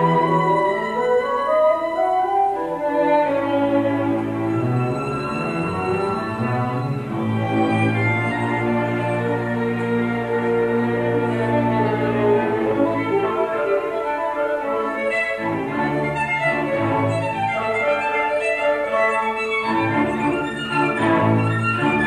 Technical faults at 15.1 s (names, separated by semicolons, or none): video or display buzz